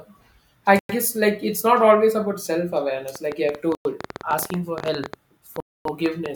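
Speech carries two kinds of fault. Three Bluetooth stalls cut the sound to complete silence: 0.79 to 0.89 s (about 104 ms), just before "guess like it's not", then 3.75 to 3.85 s (about 102 ms), and 5.60 to 5.85 s (about 251 ms). Each gap is silence with the speech picking up where it left off. That sets it apart from a codec glitch or a fade, which leave smeared or partial sound. The likely cause is radio interference delaying packets until the headphones' buffer emptied. From 3.16 to 6.27 s a train of clicks runs over the speech, around 30 similar sharp ticks at roughly 10.5 per second, unevenly spaced and peaking well above the speech level. They go on through the pauses. Because they share one shape, they are not random crackle from dust or clipping. They are likely pulses from nearby equipment or a faulty connection or power supply.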